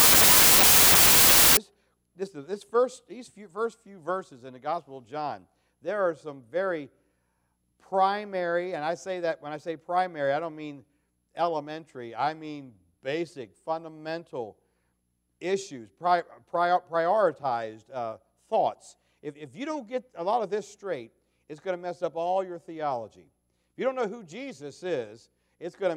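Loud harsh noise with the sound buried inside, running fast and high, fills 0 to 1.57 s: wrong sample width, 16-bit data read as packed 24-bit, playing 1.5 times too fast.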